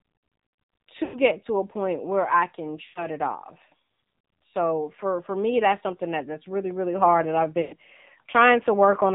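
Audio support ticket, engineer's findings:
Speech band-limited, buzzy, synthetic throughout. Nothing above 4 kHz. Probable component: AMR narrowband mobile codec (AMR-NB). Mechanism: 8 kHz sampling, vocal-tract model driven by sparse pulses per 5 ms subframe. Low bit budget leaves voicing coarse and grainy. Damage plainly audible. The degree of buzz fits a low AMR mode around 7.4 kbps.

Lost AMR speech frames at 1.04–1.17 s, 2.84–3.07 s and 7.62–7.76 s. Sound smears and stretches, then fades toward silence. Weak, rough onset on return. Decoder concealment is repeating the last good pitch and vocal-tract settings with decaying gain. Gap lengths of about 100 to 120 ms fit five or six consecutive 20 ms frames, likely failing checksum after radio errors.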